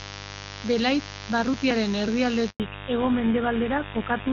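Mains buzz runs through the whole recording, a raspy 50 Hz buzz sitting roughly 15 dB below the speech. It comes from sharp switching spikes, the kind a dimmer, rectifier or poorly shielded cable lets in, that recur twice every mains cycle. Because each spike is so abrupt, the interference carries a dense ladder of 50 Hz harmonics reaching well into the kilohertz range, which is why it sounds coarse and buzzy rather than like a smooth low hum.

A handover gap opens at 2.50 s and lasts 100 ms, to 2.60 s. While the call was passed from one network link to another, no speech frames got through, so the speech fades out within a few tens of milliseconds and the line goes silent until the new link delivers audio again. Anything said during that tenth of a second is simply missing, leaving a short hole in the speech.

Fallback to narrowband follows directly from 2.60 s to the end. Up to the handover, the speech has the open, airy top end of AMR wideband (HD Voice), with no obvious coding damage, which suggests one of its higher rates. 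After the switch, the call continues on the older GSM full-rate codec, and everything above 4 kHz is gone. The speech becomes noticeably duller and more boxed-in, and picks up a rougher texture from the older codec.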